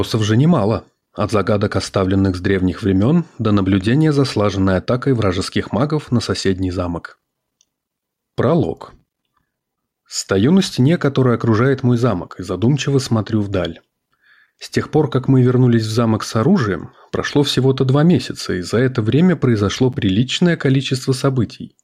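Gain pumping runs through the whole clip, with the level swinging by around 5 dB. The likely cause is input gain set far too high, with a fast limiter clamping each peak, which leaves the dynamics squashed.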